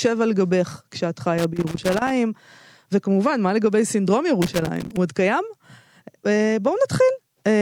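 Loose connector crackle breaks into the speech twice, from 1.38 to 2.11 s and again from 4.42 to 4.97 s. A worn or dirty contact is making and losing connection in quick succession, chopping the signal into an irregular, scratchy burst.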